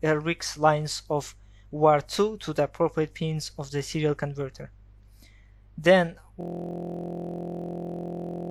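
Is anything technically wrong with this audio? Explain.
Yes. From 6.41 s to the end, the sound collapses into a steady, rough buzz at about 43 Hz. This is a system hang loop: the system froze while the hardware kept replaying one 23.22 ms buffer, roughly 90 times, which fits a 1024-sample buffer.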